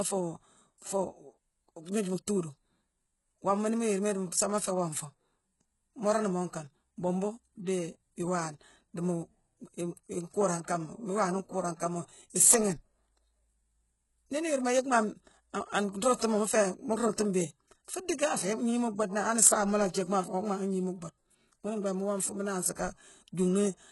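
From start to finish, the speech carries heavy damage that points to HE-AAC compression at a very low bitrate, around 12 kbps. The likely mechanism is spectral band replication. Only the lower spectrum is coded properly. The treble is rebuilt by copying lower bands upward under a coarse envelope. So the top end sounds synthetic, and its harmonics no longer line up with the ones below. The s sounds come out gritty and lispy, with a metallic edge. Nothing is present above 11.5 kHz.

From 16.16 to 16.20 s, just before "mu féé mu", there is pre-echo. It lasts about 39 ms. A sharp onset lands late in a transform block. The codec spreads its quantisation noise across the whole block, so noise sized for the loud attack also fills the quiet gap before it. You hear a brief hiss ahead of the onset. The attack itself sounds softened and smeared rather than crisp.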